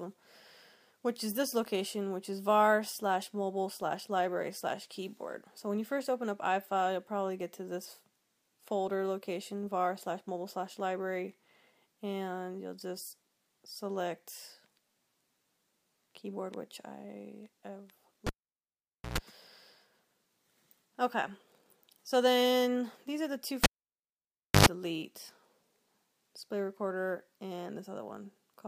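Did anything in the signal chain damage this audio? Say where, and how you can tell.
Yes. In the analogue wiring, a cable pulled and plugged in at 18.27 s and 23.64 s pops and drops out for nearly a second. Mains buzz at 60 Hz, then 50 Hz, follows as the plug tip touches first, before a second pop when the sound returns.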